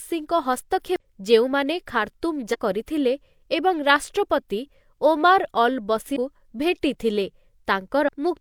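Damaged data in a compressed stream breaks into the speech at 0.96–1.01 s, 2.50–2.56 s, 6.12–6.17 s and 8.04–8.09 s. Corrupted bytes make the decoder misread frames and lose sync until it finds the next header, producing short glitches of about 50 ms.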